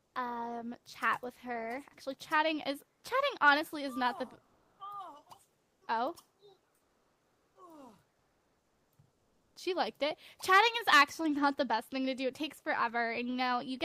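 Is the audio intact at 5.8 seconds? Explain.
No. Comfort noise replaces the background from 5.63 to 5.81 s, about 7 dB quieter, likely because transmission paused and the receiver substituted synthetic noise for 180 ms. An onset clipped by the voice detector at 5.79 to 5.81 s drops 20 ms, so the returning sound starts abruptly, without its soft beginning.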